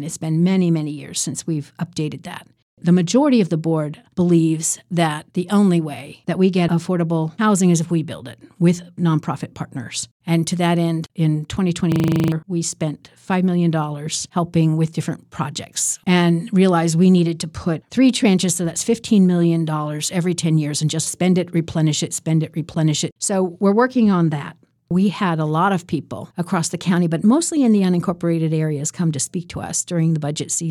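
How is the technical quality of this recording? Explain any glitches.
One glitch stands out. From 11.92 to 12.32 s there is a system hang loop: the system stalled while the hardware replayed one 40 ms buffer ten times, producing a rigid 25 Hz buzzing rattle and losing about 0.4 s of audio.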